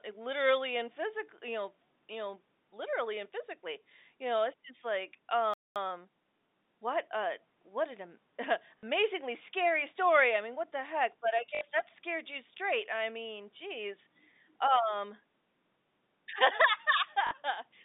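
At 5.54 s the speech halts in mid-flow and stays silent for about 0.22 s until 5.76 s, a playback stall. The likely cause is the player running out of data or its thread being blocked.

From 5.76 to 7.24 s the player works off that backlog with time-compressed catch-up, trimming and cross-fading small slices so the speech runs about 1.15 times fast. The pitch stays put, which separates it from a simple speed-up.

Brief robotic stutters at 8.79 s (40 ms), 11.55 s (60 ms) and 17.27 s (40 ms) are packet loss with the last packet repeated. The gap is filled by a looped fragment, not silence, so each stutter buzzes near 50 Hz, which fits 20 ms packets. That filled, buzzy texture and the short length set these apart from the earlier stall. Throughout, the G.711 telephone coding holds the sound to its narrow 150 Hz to 3.7 kHz line band.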